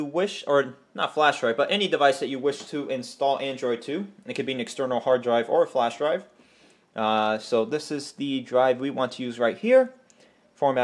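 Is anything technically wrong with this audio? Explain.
No, there are no faults.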